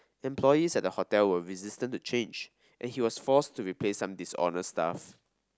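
No technical faults can be heard anywhere in this recording.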